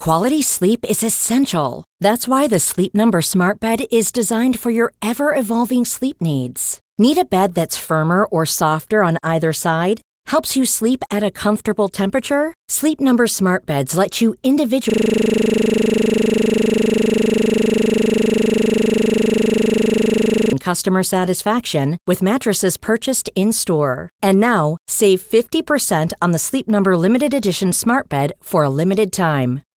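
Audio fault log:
14.90–20.53 s, system hang loop: after "let you", a single 40 ms slice repeats about 140 times, giving a steady 25 Hz buzz until "customer satisfaction with mattresses". The waveform shows identical repeating blocks, and the spectrogram shows vertical stripes every 40 ms with a harmonic comb.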